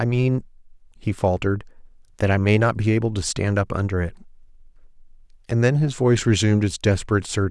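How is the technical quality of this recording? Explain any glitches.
No technical faults or glitches can be heard.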